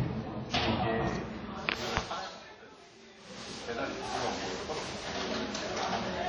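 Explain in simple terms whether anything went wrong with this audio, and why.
WMA compression damage runs through the whole clip, from start to finish, and is likely the cause of what you hear. Squeezing this sound into a small file forced the encoder to discard detail in chunks lasting tens of milliseconds. That leaves a ringing, washy quality, with hiss that swells and fades along with the sound. Quiet details vanish, and nothing survives above 17.7 kHz.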